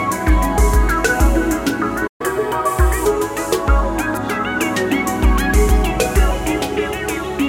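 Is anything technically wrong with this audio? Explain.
Yes, there are two related faults.

At 2.07 s the output goes silent for about 126 ms, until 2.21 s, in a playback stall. The player was likely starved of data or had its audio thread blocked, so it had nothing to send to the output. The sound cuts off abruptly in mid-flow, leaving a clear gap before it resumes.

From 2.21 s to 3.05 s the player catches up at higher speed, resampling its accumulated backlog to recover the time lost in the gap. Playback runs at 1.15 times normal speed, which also raises the pitch by about two semitones. The sound is briefly hurried and slightly chipmunk-like, then returns to normal speed and pitch at 3.05 s.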